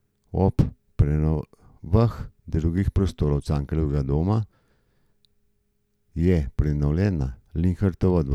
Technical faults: none

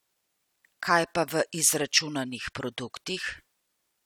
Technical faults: none

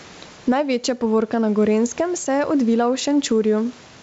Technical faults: gain pumping

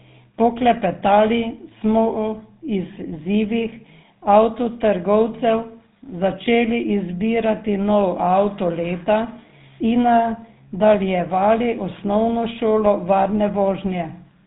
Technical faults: GSM full-rate codec

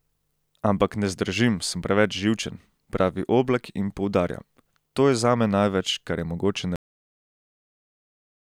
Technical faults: cut-off end

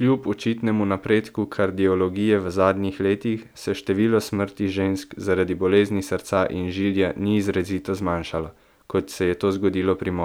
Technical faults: none

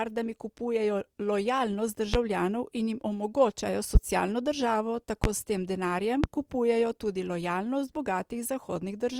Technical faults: loud pop

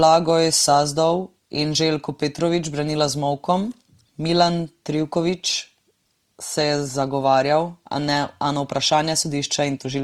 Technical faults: Opus compression

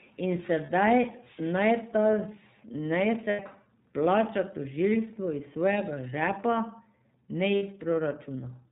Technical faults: iLBC codec; lost iLBC frames

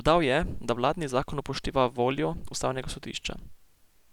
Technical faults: none

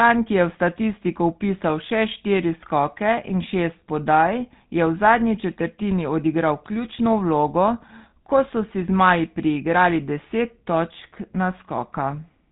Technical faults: GSM full-rate codec

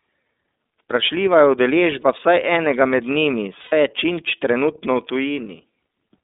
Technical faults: iLBC codec; lost iLBC frames

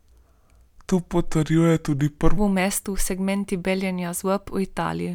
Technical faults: section at the wrong speed

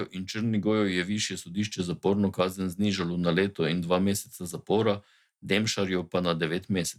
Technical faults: none

